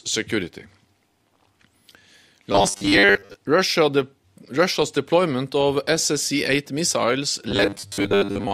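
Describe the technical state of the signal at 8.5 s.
At 8.5 s you're right in the robotic sound from repeated short buffers, which runs from 7.49 s to the end of the clip. It's most likely caused by audio arriving too seldom, so the playback side keeps looping a tiny 10 ms slice instead of waiting. Much of the sound in that stretch is those repeats, and they lock onto a steady 100 Hz buzz, giving a stiff, metallic tone that only loosely tracks what's underneath.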